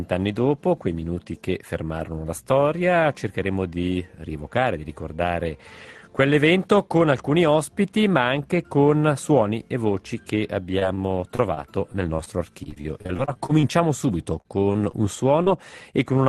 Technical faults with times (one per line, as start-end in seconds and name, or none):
10.79-10.83 short concealed packet loss
10.95-10.99 short stall from a late packet
11.35-12.28 repeated packet loss (robotic sound)
12.64-13.65 repeated packet loss (robotic sound)
14.41-15.48 repeated packet loss (robotic sound)